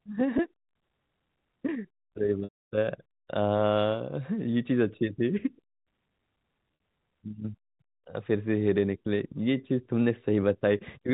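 At 0.38 s, a brief dropout of about 10 ms is covered by a slightly held, buzzy tone. This is packet loss with pitch repetition. The receiver loops the last pitch period to fill the gap. From 2.44 to 2.69 s, a much longer loss occurs. The repeated pitch fades to silence, and the speech returns with a short cross-fade. At 6.75 to 6.80 s, a 50 ms gap brings a brief buzzy hold. The G.711 telephone band stays narrow throughout.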